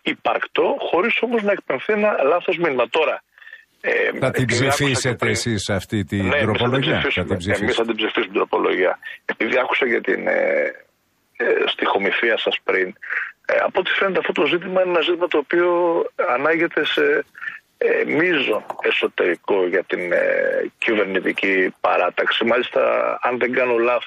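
No technical faults can be heard anywhere in the recording. There are no dropouts, glitches or other breaks in the sound at any point.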